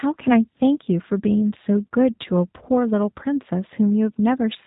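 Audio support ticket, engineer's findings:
G.729 codec damage across the whole speech clip. Plainly audible roughness and a slightly synthetic, buzzy tone. No content above 3.8 kHz, so sibilants are dull and narrow. Probable component: VoIP encoder in the call path, consistent with G.729A at a rate that fits 8 kbit/s. Mechanism: speech rebuilt from filter, pitch and sparse pulse parameters per 10 ms frame. Fine detail discarded.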